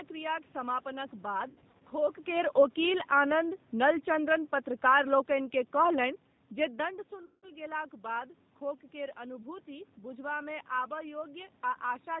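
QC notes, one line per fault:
Throughout: G.729 codec. 8 kbit/s G.729A rebuilds speech from a filter, pitch predictor and few pulses, cutting everything above 4 kHz and leaving speech rough and synthetic.
1.50–1.82 s: VoIP packet loss concealed by the speech codec. About 150 ms of scattered gaps, longest 60 ms, patched by extrapolation, giving stretched fading fragments before "खोक केर".
7.25–7.48 s: VoIP packet loss concealed by the speech codec. About 180 ms lost after "जे दण्ड", fitting six 30 ms packets; the decoder stretches the last sound into a fading buzzy tone or coloured noise.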